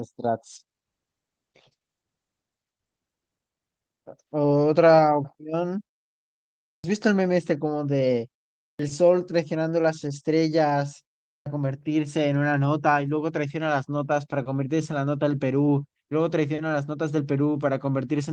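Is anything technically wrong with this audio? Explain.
Yes. There are two faults in this speech.

From 0.56 to 4.25 s there is a call bitrate drop. The bandwidth estimate fell and the encoder was told to spend far fewer bits, going from 32 kbps down to 11 kbps. It stayed at the bottom for about 1.9 s. At that rate the codec quantises coarsely and narrows the band from 20 kHz to 8 kHz. The voice sounds muffled and rough until the rate recovers.

Three phrases have a clipped start after a pause, at 6.73, 8.68 and 11.34 s. Each follows a short silence of 0.92, 0.42 and 0.36 s. In each pause the output device idled, and it needed time to wake again. That cost about 110, 113 and 121 ms of sound. So each phrase begins abruptly, with its opening sounds missing.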